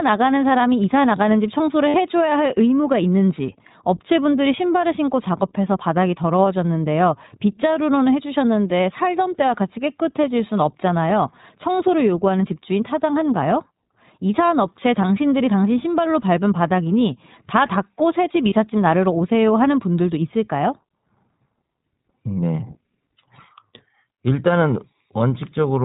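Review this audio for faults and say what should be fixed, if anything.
The whole clip carries iLBC codec damage, and it is plainly audible. Nothing above 4 kHz survives. The speech sounds rough and slightly synthetic. Each short frame's excitation is coded on its own at a low rate. The sound fits the 20 ms, 15.2 kbps mode.

Lost iLBC frames break the sound at 1.88 to 1.96 s, at 11.77 s, and at 18.50 to 18.53 s. The decoder fills each gap by repeating the last pitch cycle with noise. This gives a brief buzzy held vowel. The first gap lasts 60 ms, which fits three lost frames. Speech recovers almost at once.

To prevent both, send the audio over a wideband codec and protect the link against packet loss with forward error correction or redundancy.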